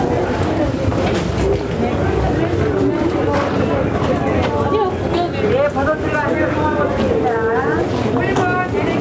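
Gain pumping runs throughout: the background swells in every gap and ducks by around ten decibels under each loud sound, likely from far-too-high input gain meeting a fast limiter. On a waveform the quiet stretches ramp upward between flattened peaks, and on a spectrogram the noise floor brightens and darkens in step with them, all beneath the clean 8 kHz ceiling of the G.722 call path.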